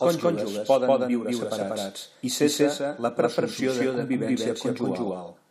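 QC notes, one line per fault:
Throughout: doubled audio track. A second full-band copy of the speech sits roughly 200 ms behind the original at about the same level, with no decay or room colour, so every syllable is echoed cleanly. Likely an out-of-step edit or a slower second capture path mixed back in.
3.59 s: damaged data in a compressed stream. Right after "separats i cessa la" a short blip cuts through, as the decoder misreads a corrupted frame, loses sync and hunts for the next frame header before normal decoding resumes.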